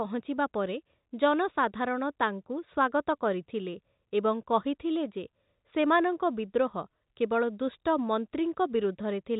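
No technical faults are present.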